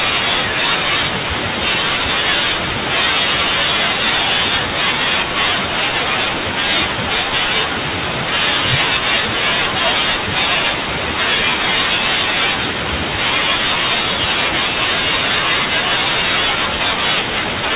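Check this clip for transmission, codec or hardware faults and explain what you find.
No transmission, codec or hardware fault can be heard anywhere in the speech: the signal stays continuous and steady in level and tone throughout.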